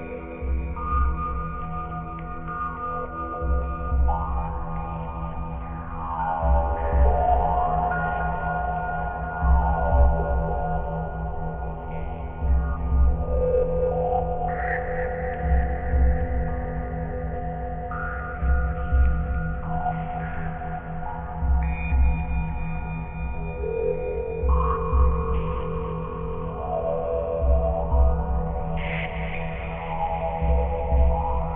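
From start to finish the high end sounds gritty and metallic, with false tones running hard up to an edge near 3 kHz. This is aliasing: the sample rate was cut, pointing to about 6 kHz, without first filtering, so higher content folded back, sitting roughly 25 dB below the signal.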